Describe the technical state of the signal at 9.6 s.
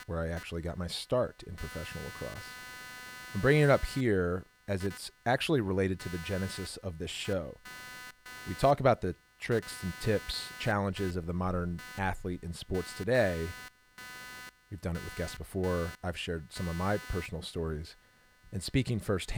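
At 9.6 s there's computer activity noise, and it's there the whole way through, not just at that moment. Processor or mouse load is shaking the shared ground, giving a buzzy chirp pulsing at around 300 Hz, roughly 20 dB under the speech.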